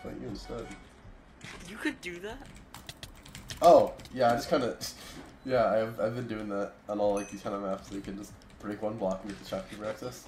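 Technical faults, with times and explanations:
0.0–2.0 s, adaptive stream starting at a low bitrate: treble sounds thin and synthetic with heavier artefacts and nothing above about 12.3 kHz, fitting a 16 kbit/s HE-AAC start, then it jumps cleaner with no gap.
3.40–3.42 s, chunks out of order: a 10 ms chunk lands one slot late, so the sound briefly jumbles across three hard joins.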